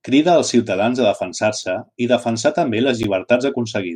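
A speech recording in which the output buffer likely twice went unfilled, so a block of samples was zeroed, a block of digital silence. At 1.63 s, between "crida els ciutadans a" and "i defensar també", a 2.7 ms hole, which fits a 128-sample buffer, cuts in and out with no fade and sounds as a tick. At 3.03 s, just after "i defensar també", a 10.7 ms gap, which fits a 512-sample buffer, is heard as a tick or dip.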